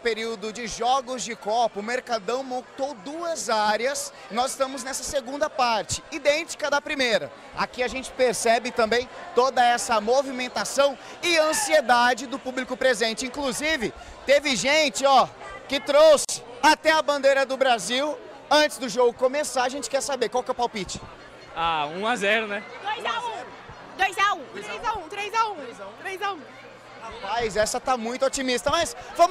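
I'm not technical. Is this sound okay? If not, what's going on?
No, there's a gap at a join of encoded pieces: at 16.25 s the sound drops out for about 40 ms, where two separately encoded chunks were stuck together untrimmed.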